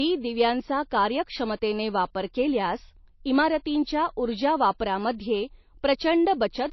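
Speech that sounds dull for its whole length, with nothing at all above 5.8 kHz; a spectrogram shows a flat, empty band over that ceiling. It is likely low-bitrate audio saved at a high bitrate, an MP3 near 27 kbit/s re-encoded much higher, which cannot restore what was lost.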